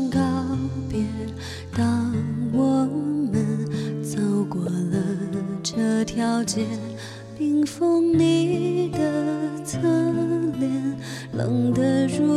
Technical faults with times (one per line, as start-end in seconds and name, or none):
4.66-4.68 corrupt frame decoded